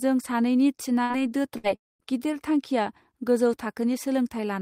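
At 1.03 to 1.13 s and again at 1.58 to 1.67 s, a burst of packet loss leaves the receiver stretching and fading the last speech for about 60 ms, then skipping about 60 ms. From 1.76 to 2.02 s, a long network dropout likely cut delivery: the concealed sound fades to silence lasting about 210 ms, and speech returns with roughly 240 ms missing.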